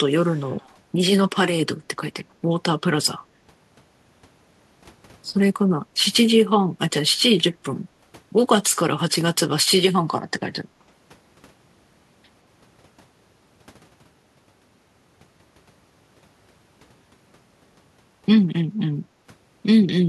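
At the far end a loudspeaker was likely feeding the microphone, and the echo canceller let part of that pickup through, returning it down the line as an echo leak. From 0.1 to 0.68 s a delayed copy of the speech trails the original by about 173 ms. It sits very low, around 35 dB under the speech, so it comes across as a faint ghost just behind the speech rather than a distinct repeat.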